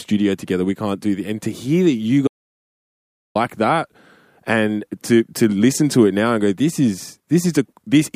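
At 2.28 s the speech cuts off mid-flow into total silence, with no room tone at all. It returns at 3.35 s, so about 1.08 s is lost. This is an audio dropout to silence, likely a lost input while the recorder kept writing zeros.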